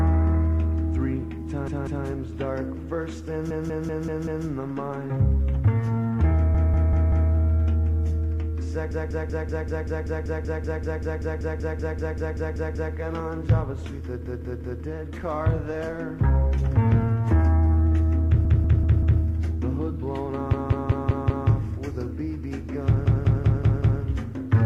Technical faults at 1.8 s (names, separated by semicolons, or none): repeated frames